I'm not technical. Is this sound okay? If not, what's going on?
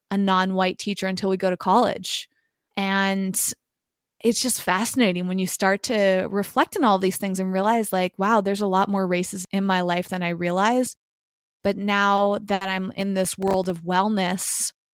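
No, there are two problems, both near the end of this speech clip.

A short stall from a late packet happens twice, at 12.16 s and 12.54 s. A piece of incoming audio arrived late, so the player ran out of sound to play and held the last bit of voice while it waited: about 20 ms the first time and 70 ms the second. Nothing is lost, but a sound drags on slightly too long, sometimes with a faint buzz.

Processor overload crackle runs from 12.93 s to 13.7 s. The computer was too busy to deliver each tiny slice of audio on time. Each slice is only a millisecond or two long, and around fifteen of them came up empty and turned to brief silence. Those rapid little dropouts blend into a gritty, crackling tear over the voice that stops once the computer catches up.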